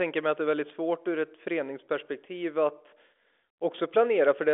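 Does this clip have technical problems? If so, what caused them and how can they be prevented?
No, this clip has no technical problems.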